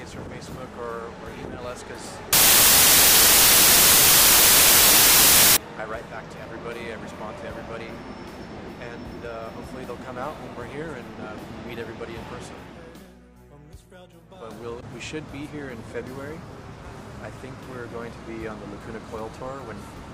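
From 2.33 s to 5.57 s the audio turns into loud, harsh broadband noise. These are samples built from the wrong bytes: misaligned or swapped byte order pushes the rapidly changing low bits into each sample's most significant position.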